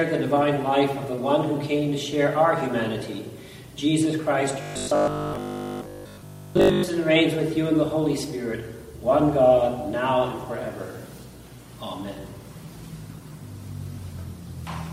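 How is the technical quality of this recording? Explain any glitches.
The recording has one glitch. From 4.61 to 6.83 s there is robotic sound from repeated short buffers: a rigid 50 Hz metallic buzz, likely from a stalled stream looping its last 20 ms block throughout, which shows as evenly spaced identical waveform cycles and sharp harmonic lines on a spectrogram.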